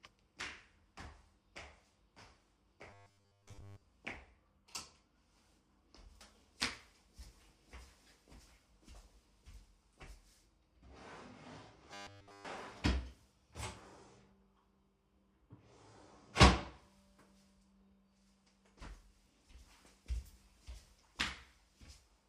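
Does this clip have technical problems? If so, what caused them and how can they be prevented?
Yes. Incoming audio likely arrived too seldom, so the playback repeated roughly 10 ms buffers while skipping the real signal. This produced robotic sound from repeated short buffers, a rigid 100 Hz metallic buzz, from 2.90 to 3.82 s (mostly repeats) and from 11.94 to 12.47 s (entirely repeats). Larger jitter buffers or steadier network and CPU scheduling would prevent this.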